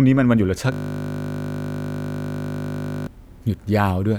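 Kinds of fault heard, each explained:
System hang loop, 0.72 to 3.07 s: the system froze while playback cycled one 20 ms buffer over a hundred times, giving a steady 50 Hz buzz.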